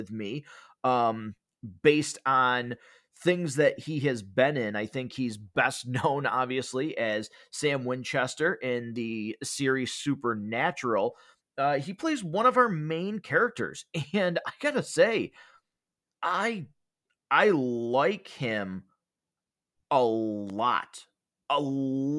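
No technical faults can be heard anywhere here.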